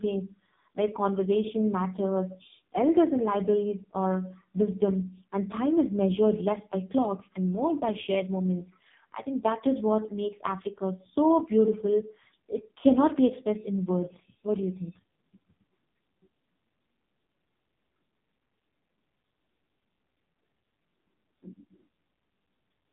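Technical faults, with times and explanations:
Throughout, AMR narrowband mobile codec: the speech comes through squeezed into a phone band of roughly 150 Hz to 3.7 kHz, with nothing at all above 3.7 kHz. The damage is heavy, with a buzzy, synthetic edge that fits one of the lowest AMR-NB modes, around 5.15 kbps. At that rate the codec rebuilds the voice from a crude vocal-tract model fed by very few pulses per 20 ms frame, so the natural texture of the voice gets lost.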